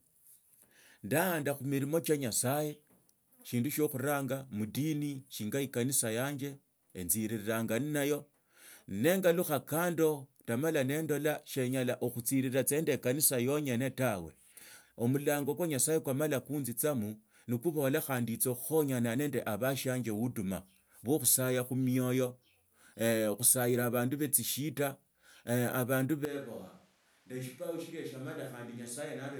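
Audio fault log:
26.25 s to end: switch to a distant microphone. The speech abruptly turns roomy and hollow, loses low end, drops roughly 10 dB, and background noise rises to around 30 dB below the speech, likely because the close microphone dropped out, leaving a farther pickup.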